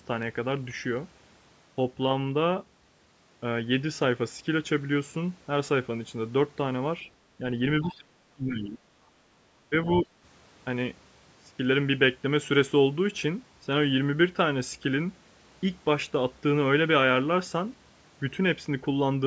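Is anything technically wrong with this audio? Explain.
Yes. Between 7.38 and 10.08 seconds the call's echo canceller struggles while both sides talk at once. The speech is briefly suppressed in double talk three times, and a scrap of the other side's voice leaks through once.

Speech suppressed in double talk occurs from 7.38 to 7.44 s, from 7.83 to 8.9 s, and from 9.7 to 10.08 s. The canceller likely mistook the talker for loudspeaker echo and attenuated everything. The first dip is slight, about 5 dB. The second is severe, up to about 35 dB, and lasts roughly a second. The third reaches about 15 dB.

The other side's voice leaking through appears from 7.82 to 7.95 s. Residual loudspeaker echo likely escaped cancellation and sits about 20 dB below the speech. It comes through as a faint fragment of a second voice just as the long suppression begins.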